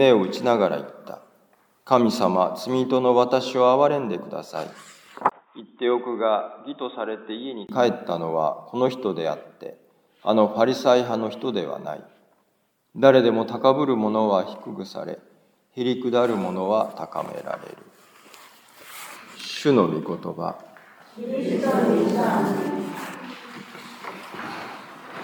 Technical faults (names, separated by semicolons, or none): input switched to a poorer device